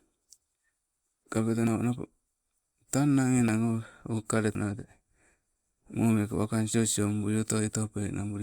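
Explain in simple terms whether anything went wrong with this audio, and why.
At 1.67, 3.48 and 4.55 s the speech skips ahead, losing small chunks of up to about 0.15 s. That's likely a dropped buffer (overrun).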